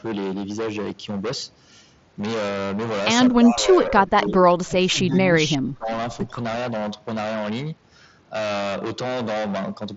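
Hard clipping runs through the whole clip. The speech is driven about 23 dB past what the signal path can carry, so roughly a third of the waveform has its peaks sheared flat. At that depth it is not an occasional crackle on peaks. Every loud syllable carries a harsh, buzzy fuzz. That rasp differs from the light graininess of the mSBC Bluetooth headset link, which passes nothing above about 7.7 kHz. The clipping harmonics come from the flattened peaks on every loud sound.

From 3.41 to 4.43 s, and again from 4.6 to 5.91 s, the voice sinks in level. This is speech suppressed in double talk, likely an echo canceller ducking the near talker while the far side speaks. The first stretch dips by around 10 dB. The second goes deeper, to roughly 20 dB, and pulls down for about a second in total.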